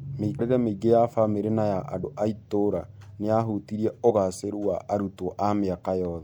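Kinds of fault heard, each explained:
compressed frames skipped: the speech jumps forward with a short, smeared blip rather than a hard click at 0.38, 2.03 and 4.09 s, dropping roughly 150, 50 and 30 ms. That fits whole 26.1 ms frames going missing: several, then two, then one.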